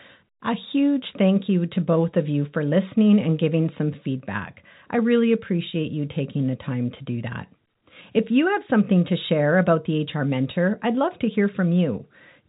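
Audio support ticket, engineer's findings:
No faults found; the speech is band-limited to about 3.8 kHz with faint level-following grain, consistent with a normally working G.711 A-law telephone path at 64 kbps.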